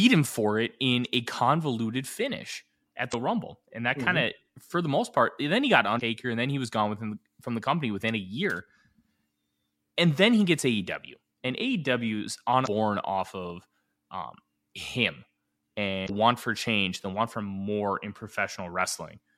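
At 3.10 to 3.14 s, just after "a convoluted finish at", the speech breaks with damaged data in a compressed stream. The same fault returns at 5.97 to 6.01 s, at 12.63 to 12.68 s just before "off of um him", and at 16.06 to 16.10 s just before "want for change the". Each lasts about 40 ms. Corrupted frames in the compressed file make the decoder misread or discard them and lose sync until it finds a valid frame header, leaving a chirp, squawk, click or brief hole. Unlike an electrical click or a playback buffer dropout, this fault comes from the damaged coded data itself.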